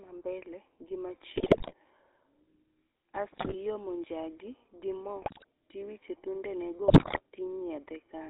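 Throughout, the speech carries the buzzy, gravelly roughness of the GSM full-rate codec, which fits a 13 kbps stream. The coder rebuilds the voice from a vocal-tract filter fed by sparse regular pulses, and nothing above 4 kHz survives, so the sound is dull and coarse.

Bursts of GSM bit errors hit from 1.36 to 1.74 s, 3.32 to 3.55 s, 5.22 to 5.44 s and 6.88 to 7.21 s. Corrupted filter, pitch and gain values reach the decoder, producing squawks, pops and gargling, with the final burst carrying the heaviest error rate, about 11.8%.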